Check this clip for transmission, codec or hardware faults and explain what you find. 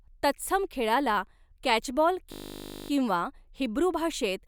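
One hardware-level fault is present: a system hang loop from 2.32 to 2.9 s. A 20 ms slice of the speech repeats exactly while the playback ring buffer cycles unattended, producing a steady 50 Hz buzz. Little or no audio appears lost once playback resumes.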